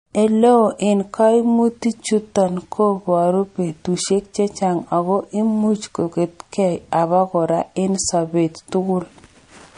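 Throughout, the speech sounds watery and swirly with nothing above 10.1 kHz, likely MP3 compression, which fits a bitrate near 40 kbps starving weak frequency lines.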